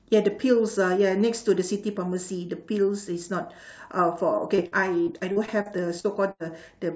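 From 4.56 to 6.42 s, speech turns choppy and robotic: repeated packet loss, with gaps up to 80 ms patched by extending the previous sound.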